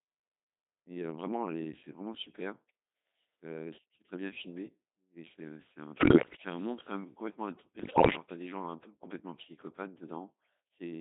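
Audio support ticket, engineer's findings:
Codec 2 vocoder across the whole clip, heavy damage. Encoder sends only pitch, voicing, energy and spectral envelope, and the decoder rebuilds speech from sine waves, so the waveform is lost. Result is robotic, buzzy speech in a 250 Hz to 3.7 kHz band, consistent with a 2.4 kbit/s mode.

Bit errors on digital voice radio at 5.98–6.36 s and 7.80–8.16 s. Corrupted frames from a weak link, roughly one bit in ten flipped, feed wrong pitch, level, voicing and spectral parameters to the vocoder. Speech breaks into warbles, bleeps and gibberish with sudden pitch and tone jumps.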